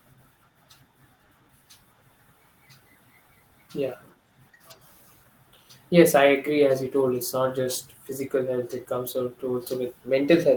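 No technical faults can be heard anywhere in the recording.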